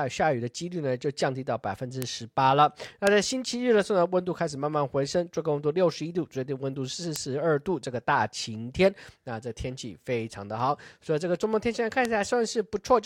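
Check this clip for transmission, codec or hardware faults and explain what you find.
There's one kind of fault here: four bit error spikes, at 2.02, 3.07, 7.16 and 12.05 s. Each is a single sharp, broadband tick that has nothing to do with the speech. A flipped bit throws a sample or a few up by a power of two, reaching about -5 dBFS (about -11 dBFS for the last), then snapping straight back.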